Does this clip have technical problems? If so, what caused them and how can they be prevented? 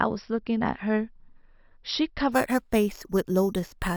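Yes. From 2.32 s to the end, imaging from sample-and-hold upsampling adds a metallic fizz about 21 dB below the speech. Each sample was simply repeated, which fits 12 kHz audio raised to 48 kHz. The spectrogram shows a mirrored copy of the speech between 6 kHz and 12 kHz, and the waveform looks stair-stepped. Prevent it by resampling with a proper low-pass interpolation filter instead of sample repetition.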